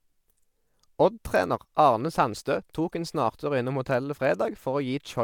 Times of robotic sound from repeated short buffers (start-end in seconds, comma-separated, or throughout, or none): none